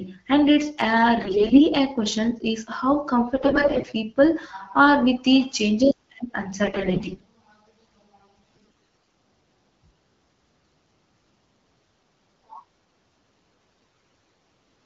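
Speech that turns hoarse, scratchy and gargly in five short bursts, at 1.21 to 1.62 s, 3.36 to 3.93 s, 6.64 to 7.24 s, 8.45 to 9.10 s and 13.86 to 14.26 s, while pitch and level hold roughly steady. These are AMR bit errors. Over a weak link, something like one bit in ten to one in seven of the less protected bits arrived flipped, misplacing the excitation pulses and skewing the fine pitch, gain and spectral values. The wideband AMR-WB coding underneath sounds clear, which fits a rate of about 12.65 kbit/s.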